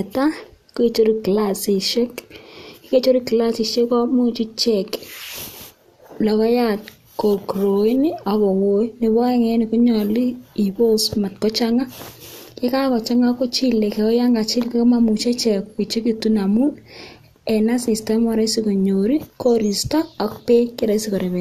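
No technical faults can be heard anywhere in this speech recording. Nothing in the audio calls for comment.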